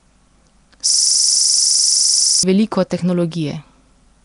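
A speech recording with a fault running throughout and another in the middle. The whole clip has a rough, hissy halo. Its sound is smeared and underwater. Nothing is present above 10.6 kHz. This points to a low-rate codec, likely Nellymoser compression at roughly 44 kbps. That codec spends a fixed, small bit budget on each short block. Weak bands get no bits and are filled with noise. The damage is plainly audible. From 0.90 s to 2.43 s, a system hang loop takes over. One 42.67 ms piece of audio repeats exactly, about 36 times. The result is a coarse buzz at 23.4 Hz. The machine stalled while the sound hardware kept replaying the same ring buffer. The loop length fits a 2048-sample buffer.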